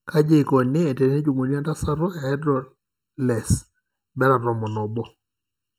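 Channel delay (comb filtering) runs through the whole speech clip. One channel arrives late by about 0.7 ms, and summing to mono cancels the shared content at evenly spaced frequencies, the first dip near 700 Hz and further ones at regular steps above. The voice sounds hollow and phasey. Unlike a plain treble loss, which only dulls the top end, these notches stay fixed and recur across the spectrum.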